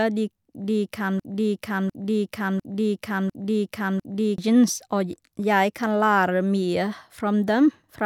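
Something upstream in the chain, likely a stalled player, encoder or stream, stopped receiving fresh data at 1.20 s and kept replaying the last chunk it held. The result is a broken-record loop: a 0.70 s fragment of speech repeats back to back five times, identical each pass, until normal playback resumes at 4.38 s. Whatever should have been heard during those three seconds is gone.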